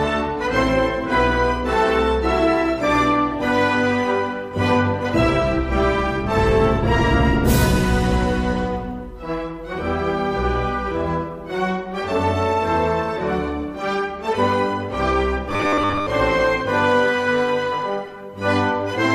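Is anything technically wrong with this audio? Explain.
Yes. From 15.50 to 16.07 s there is robotic sound from repeated short buffers. The sound becomes a rigid, metallic 100 Hz buzz, likely because late-arriving audio was covered by looping 10 ms chunks while most of the real signal was skipped. A spectrogram shows evenly spaced lines at multiples of 100 Hz, and the waveform repeats near-identical 10 ms segments.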